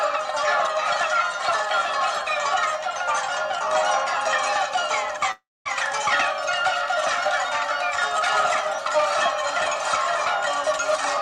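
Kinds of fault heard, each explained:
Long network dropout: at 5.31 s the sound breaks off into a fading, buzz-like continuation that sinks to silence for about 230 ms, then resumes at 5.67 s with about 340 ms of material skipped, likely from packets that never arrived.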